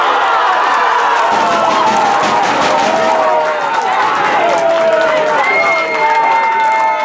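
From start to finish there's a steady tick running under the audio at 25 per second, and it only shows up when there's actual signal, going quiet in the gaps. That's the signature of a resampler restarted on every block. The sound was chopped into 40 ms chunks and each one was converted separately, likely while going from 44.1 kHz down to 16 kHz. At every chunk edge the converter was missing its real neighbouring samples, so each boundary picks up a small glitch, and at this rate they blur into a buzz.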